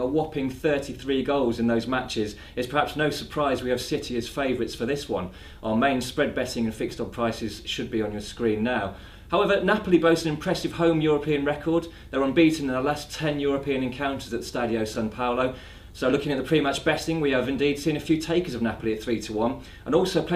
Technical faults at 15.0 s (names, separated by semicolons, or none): chunks out of order